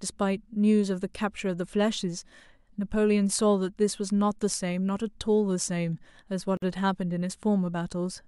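A gap at a join of encoded pieces opens at 6.57 s and lasts about 52 ms, to 6.62 s. Separately encoded pieces were joined untrimmed, leaving encoder start-up delay and last-frame padding, so the speech drops abruptly into silence, with smeared edges, then resumes where it stopped.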